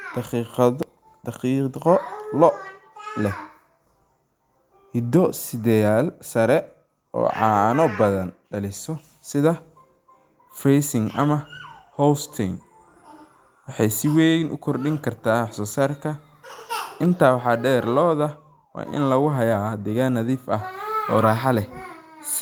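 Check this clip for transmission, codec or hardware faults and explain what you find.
Nothing here points to a transmission, codec or hardware problem, so there's no fault to report in this speech.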